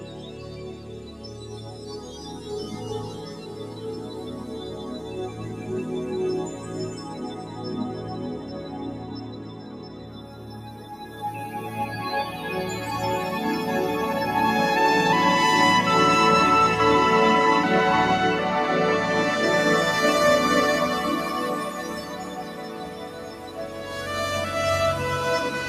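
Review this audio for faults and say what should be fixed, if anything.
A noise suppressor applied to music or sounds is active across the whole clip. Built for speech, it treats sustained tones, ambience and reverb as noise. Held material and decay tails sink while attacks pass through, producing a pumping level swing of around 10 dB.

Sound cut by the noise suppressor occurs at 0.0–1.84 s, 3.31–5.15 s, 8.93–11.07 s and 22.03–23.91 s. In each stretch the suppressor pulls steady or fading sound down further, by about 4 dB at its deepest, so tails are shortened and the passage thins out.

To prevent this, disable speech-oriented noise suppression on this signal path, or switch it to a music or original-sound mode, and reprocess from an unsuppressed source.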